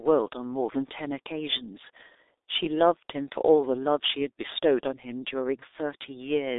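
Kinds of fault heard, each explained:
G.723.1 codec: The speech sounds muffled and hoarse throughout, with consonants smeared and nothing above 3.8 kHz. The low-rate telephony coder, at 6.3 kbit/s with a 300 Hz to 3.7 kHz line band, rebuilds each 30 ms frame from a coarse, slowly updated voice model.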